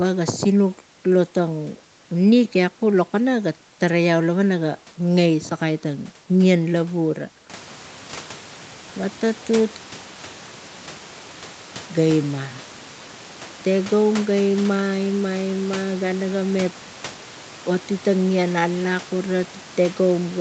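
Nothing goes wrong technically in this speech recording, though the room's background noise steps up by about 11 dB somewhere around 7 or 8 seconds in and then sits about 22 dB below the talking, while the call's Opus coding keeps everything under 8 kHz the way it normally does.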